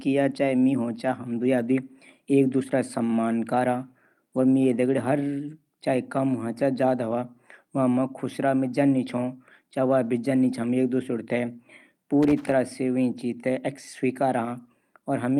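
At 6.59 to 6.61 s there's a lost packet rebuilt from error correction. Roughly 20 ms of the speech comes through a bit rougher and noisier, which fits a single lost packet being patched from the low-bitrate copy riding in the next one, so there's no actual gap.

Then from 12.23 to 12.52 s you get loose connector crackle, an irregular burst of scratchy crackling lasting about a third of a second. That's a worn or dirty contact rapidly making and breaking, chopping the signal as the connection shifts.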